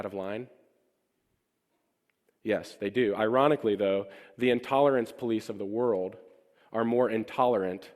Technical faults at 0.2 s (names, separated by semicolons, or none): none